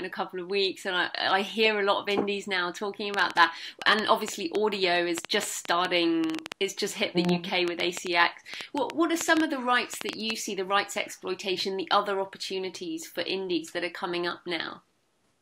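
From 3.14 s to 10.31 s a train of clicks ticks over the sound, around forty sharp pulses of much the same shape at about 5.7 per second. The spacing is uneven, and the clicks stand out by roughly 15 dB, audible in quiet gaps as well as under louder passages. That points to an outside pulse source, likely interference from nearby equipment or a faulty connection or power supply. Unlike scattered crackle, the clicks share one shape.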